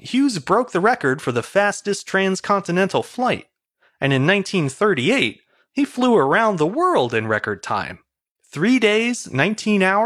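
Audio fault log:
No fault found in this speech clip.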